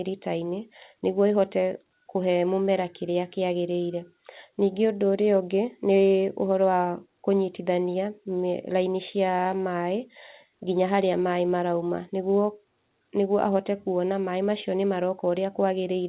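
No technical faults can be heard anywhere in this speech clip. It has passed through a WebRTC call path, and nothing reaches above 4 kHz, which fits the narrowband G.711 A-law codec.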